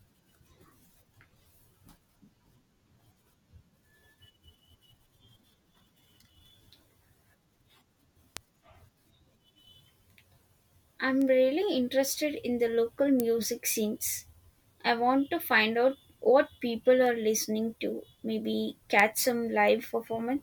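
Speech with five sharp, broadband ticks at 8.37, 11.22, 13.2, 17.06 and 19.00 s, peaking between about -24 and -6 dBFS. These are bit error spikes: a flipped bit makes one or a few samples jump by a power of two and snap back.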